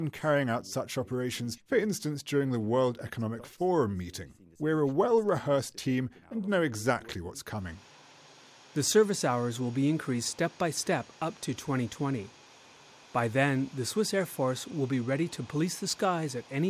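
Nothing stood out as a technical problem on listening.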